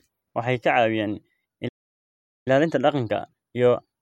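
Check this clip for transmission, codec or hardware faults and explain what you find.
Two playback faults are present in this speech clip: a playback stall followed by time-compressed catch-up.

The playback stall runs from 1.68 s to 2.48 s. The speech cuts off in mid-flow and the output goes completely silent for about 0.78 s before sound resumes. The likely cause is the player running out of buffered data, or its output thread being blocked, so nothing reached the output until it recovered. This is a break in delivery, not a pause in the speech.

Time-compressed catch-up follows directly, from 2.48 s to the end of the clip. To recover from the backlog left by the stall, the player removes short segments and cross-fades across the joins. The result plays about 1.1 times faster than normal. The speech sounds hurried but stays at its normal pitch, because the playback rate is unchanged.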